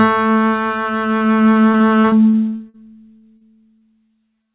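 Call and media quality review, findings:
Repeated packet loss (robotic sound), 1.72–2.76 s: choppy music with eight holes, longest 41 ms, about 23% of the stretch concealed. Jitter buffer/decoder continuing the last sound across successive lost or late packets, so fragments go missing.

Burst of packet loss, 3.18–3.25 s: held buzz or fading hiss lasting 49 ms in place of 40 ms of missing music, then a 14 ms skip forward on resume. Receiver extrapolated, faded the fill, and dropped audio to realign.

Short concealed packet loss at 3.37–3.43 s (35 ms fill), 3.79–3.83 s and 4.07–4.11 s (20 ms each): brief smears or wobbles. Decoder patching each hole from the preceding waveform, pitch-based where tonal, shaped noise otherwise.

Call path audibly band-limited, nothing above 4 kHz, consistent with G.711 mu-law at 64 kbps.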